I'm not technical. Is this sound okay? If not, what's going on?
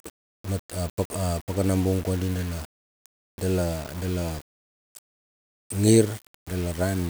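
No, it isn't quite right. All the way through the speech there's a gritty, grainy roughness clinging to the voice, and it rises and falls with the talking itself rather than sitting underneath as a steady hiss. That's the signature of low bit depth without dither: the sound is likely stored with only about 6 bits, so every level gets rounded to a coarse step. Quieter bits of speech sound sandpapery and may sputter or fade into silence.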